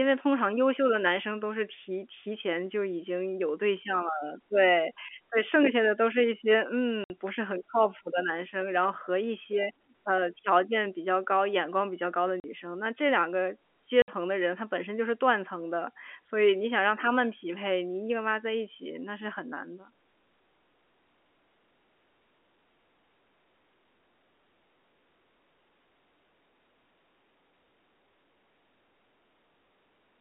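At 7.04 s, 12.4 s and 14.02 s the speech drops into dead silence for 60, 40 and 60 ms. That's packet loss filled with silence. Lost packets were replaced by nothing, so each gap has hard edges, and the lengths fit 20 ms packets. The narrow G.711 telephone band stays intact throughout.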